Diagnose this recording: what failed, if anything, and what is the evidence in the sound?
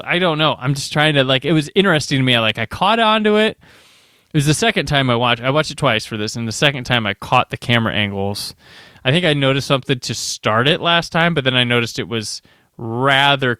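Hard clipping at the converter or a gain stage feeding it: the loud speech peaks at 2.32–2.50, 4.96–5.32, 6.64–6.96, 7.33–7.75, 10.67–11.24 and 13.11–13.32 s exceed full scale by about 0 to 2 dB. Their tops are cut flat, adding high harmonics heard as brief crackle.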